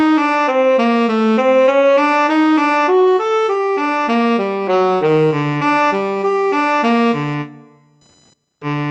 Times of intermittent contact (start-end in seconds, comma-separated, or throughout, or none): none